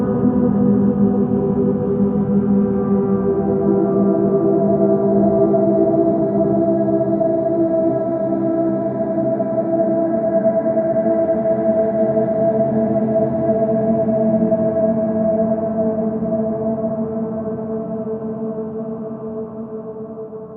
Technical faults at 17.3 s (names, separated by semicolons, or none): none